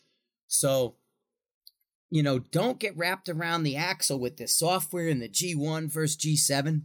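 No technical faults are audible.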